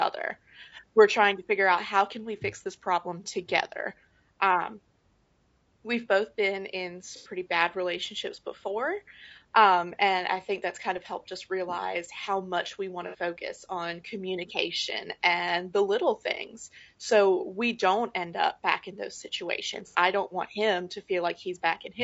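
Across the whole speech clip there is plainly audible coding damage of the kind left by low-delay AAC compression, likely AAC-ELD running at a low rate consistent with around 32 kbps. The codec's short frames resolve the pitch harmonics poorly, so the voice comes out rough and grainy, with noise filling the gaps between harmonics and a thin, somewhat synthetic top band.

Three dropouts show AAC frame loss with concealment. The first runs from 7.16 to 7.30 s, after "we've both been in" and before "bad relationships before". The second runs from 13.07 to 13.15 s, between "realize how much we" and "on communication and the". The third runs from 19.88 to 19.95 s, between "back in those situations" and "I don't want him". In each gap the decoder rebuilds the missing audio from the last good spectrum. The longest patch covers about 90 ms and fits three lost frames, and the two later ones cover about 60 ms each, fitting two lost frames apiece. 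All three are too short to fade to silence and instead sound like brief smeared, noisy, phasey blurs.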